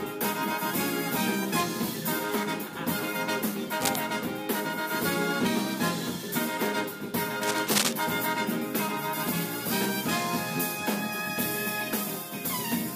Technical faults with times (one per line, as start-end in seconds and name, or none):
3.80-3.96 cable scratch noise
7.43-7.93 cable scratch noise